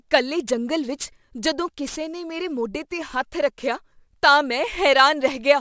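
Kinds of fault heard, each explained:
Aliasing: unfiltered downsampling folds content above 8 kHz back down as gritty sibilants about 20 dB under the speech; the spectrogram's energy runs hard to the 8 kHz edge.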